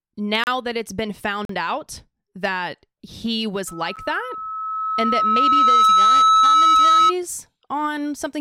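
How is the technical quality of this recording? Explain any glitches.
The recording has two kinds of fault: three short dropouts into digital silence, and a long feedback squeal through the middle of the speech.

Blocks of digital silence occur at 0.44 to 0.47 s (32 ms), 1.45 to 1.49 s (about 43 ms) and 3.96 s (about 11 ms). Each time, the output buffer most likely wasn't filled in time, so zeros went out instead of audio. The longer gaps sound like brief holes, and the shortest is closer to a single tick. Their lengths fit buffers of 2048 and 512 samples at 48 kHz. Unlike a fade or a level dip, the sound stops dead, with hard edges.

Loudspeaker feedback squeal runs from 3.67 to 7.13 s. The microphone was picking up the loudspeaker it fed, and at 1.3 kHz the loop gain passed one, so that tone kept reinforcing itself. It swells over roughly two seconds to about 10 dB above the speech, then holds as a piercing whistle. 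Steady hum or an interfering tone would be present at a fixed level, but this one builds up from nothing.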